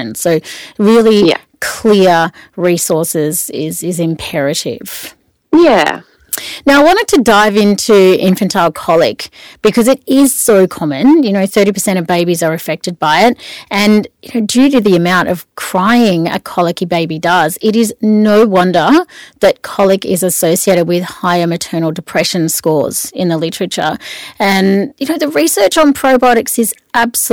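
From start to finish, every loud syllable of the speech carries a harsh, buzzing fuzz, with a gritty crackle riding on the strongest peaks. This is hard clipping: the signal arrives about 12 dB hotter than the stage can pass, so the tops of the waveform are sliced flat. Only a small share of samples, around one in twenty, hit that ceiling, but each flattened peak sprays harmonics high up the spectrum, which is where the edge comes from.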